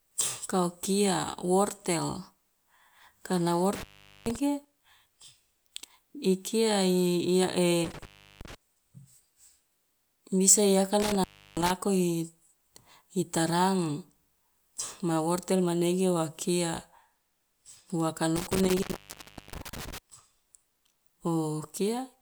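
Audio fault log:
3.73–4.36 s, 7.84–8.55 s, 11.00–11.70 s (after "bisa i"), 18.36–19.98 s: intermittent contact. A loose connection opens for 0.33 to 0.71 s each time. The speech drops out with crackle at each edge.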